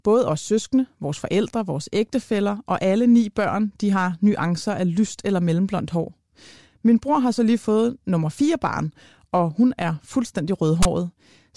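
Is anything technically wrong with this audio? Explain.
Yes. From 10.83 to 10.85 s, near the end of the speech, there is a brief, loud, hard-edged rasp pushed off to one side. This is file tags played as audio: a block of text metadata was read as if it were sample data.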